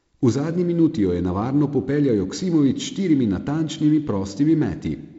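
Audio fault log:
Nothing wrong turns up in this speech, which comes through G.722 wideband telephone coding at 48 kbit/s with the usual light coding texture and nothing above 7.7 kHz.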